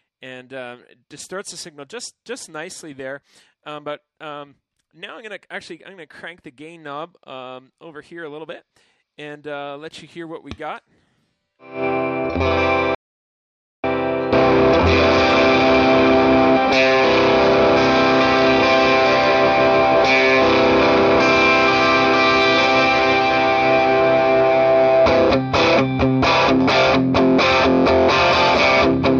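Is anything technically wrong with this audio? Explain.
Yes. From 12.95 to 13.84 s the sound cuts out abruptly into dead silence, with no room tone, then returns mid-flow after about 0.89 s. This audio dropout to silence is likely the input being lost, through a disconnected device, failed link or stray mute, while recording continued.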